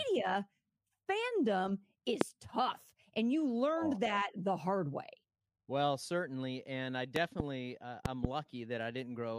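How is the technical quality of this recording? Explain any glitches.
The speech is marred by three loud pops. At 2.21 to 2.24 s, just before "tough and you learned", a single pop peaks around 25 dB above the speech. At 7.16 to 7.42 s, after "certainly and I", comes a double pop around 20 dB up, and at 8.06 to 8.27 s another double pop around 15 dB up. Each is likely a voltage spike from a plug, switch or static discharge. Each one sounds like a sharp thump over the continuing speech, shows as a tall spike on the waveform, and appears as a bright full-height vertical stripe on a spectrogram.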